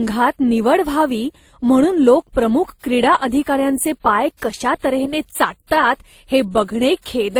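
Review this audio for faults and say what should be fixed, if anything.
Throughout the speech, coding artefacts of two different characters sit on top of each other, which points to transcoding between lossy codecs, likely a moderate-rate WMA-style encode followed by a low-rate Opus-style one. The second encoder spends its bits reproducing the first one's smearing and adds its own, so the artefacts stack. A spectrogram would show blotchy, time-smeared high-frequency texture and nothing above about 20.2 kHz. Encode once from the original source rather than re-encoding already compressed audio.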